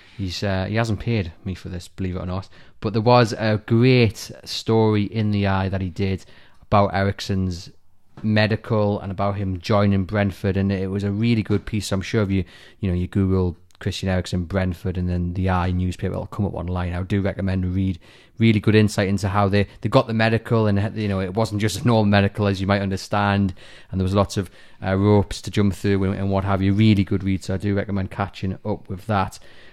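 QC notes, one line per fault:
2.24–3.61 s, channel delay (comb filtering): one channel runs late by roughly a single sample, a few hundredths of a millisecond, and the mono sum cancels near the top of the band. The first notch sits around 20 kHz, so the speech dulls slightly rather than sounding hollow.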